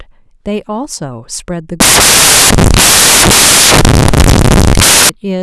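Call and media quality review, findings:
Samples built from the wrong bytes, 1.80–5.09 s: speech abruptly replaced by loud broadband noise, close to white on loud passages. Probable component: decoder or sample reader. Byte order or alignment is off, so the low-order bits land in the high-order positions.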